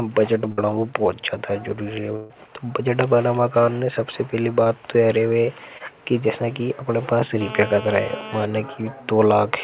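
Right at the start, from 0.52 to 0.60 s, there's a burst of packet loss. About 60 ms of audio never arrived, so the receiver stretched the last bit of speech and faded it, and then the talker jumps ahead into "बहुत ज्यादा" with a chunk gone. A longer one hits at 2.16 to 2.32 s. Roughly 140 ms is missing there, and you hear a held, dying-off smear instead of real speech before it picks up later in the sentence.

There are two short concealed packet losses, each about 20 ms. The first is at 4.64 to 4.68 s, between "कान ने सबसे पहली" and "तोयरे रहे". The second is at 5.78 to 5.82 s. In both, a few hundredths of a second didn't reach the decoder in time, so it papered over the hole by extending the previous sound and blending back in. They come across as a quick little wobble rather than an obvious dropout.

Then from 7.41 to 8.45 s there's GSM phone buzz, a harsh, raspy 217 Hz drone full of harmonics. 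It sits about 12 dB under the speech and has nothing to do with what's being said. A 2G handset nearby was pulsing its transmitter 217 times a second, and the audio circuitry rectified those bursts. It stays steady throughout, the way it does during a call. Underneath everything, the whole clip is band-limited with nothing above 4 kHz, which points to a narrowband call codec such as G.711.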